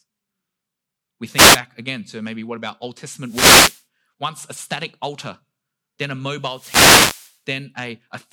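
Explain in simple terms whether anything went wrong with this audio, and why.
Three bursts of static interrupt the speech: wireless microphone noise hits. They occur at 1.32 to 1.60 s, before "again to maybe what"; 3.23 to 3.84 s, before "once a static altar"; and 6.44 to 7.39 s, after "static altar then a". The radio signal faded and receiver noise rose.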